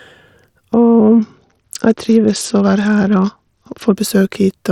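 From about 0.73 s to 3.95 s the speech goes dull and gritty: that's a Bluetooth SBC bit pool drop. The link starves the top sub-bands of bits and coarsely quantises the rest, and the sound points to the bit pool falling from around 28 to 8, roughly 72 kbps.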